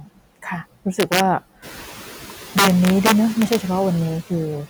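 The noise suppressor leaves artifacts throughout, pulling the background down between phrases and letting it rise again under the speech. Right at the start, 0.0 to 0.19 s, it mistakes some speech for noise and cuts it by up to about 18 dB, so roughly 150 ms sounds swallowed. From 1.0 to 1.2 s, integer overflow wraps peaks pushed about 2 dB past full scale to the opposite sign, giving harsh cracks. Around 1.5 s the room noise rises by about 13 dB, and from 1.59 to 2.31 s the suppressor again cuts speech, by up to about 15 dB, leaving roughly 100 ms faint. Then from 2.58 to 3.56 s, overflow returns with about 5 dB of overdrive.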